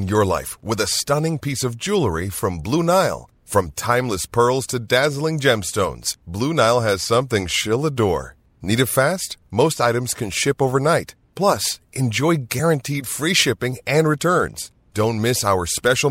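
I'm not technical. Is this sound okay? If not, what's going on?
No. At 12.58 s, just before "free shipping and returns", there are compressed frames skipped. One 26 ms chunk never plays, so the speech jumps ahead with a soft smeared blip, not a sharp click or silent gap.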